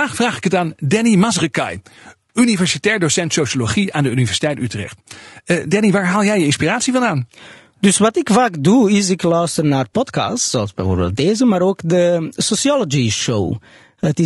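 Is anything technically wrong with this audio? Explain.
Yes. The speech carries plainly audible low-delay AAC compression from start to finish. The voice sounds rough and grainy, with a hiss filling the gaps between the pitch harmonics and a top end that feels thin and a bit synthetic. That points to AAC-ELD at a low bitrate, likely around 32 kbps. Its very short frames can't separate the harmonics cleanly, and at this low bitrate the bits run out, so the codec fills the gaps with noise.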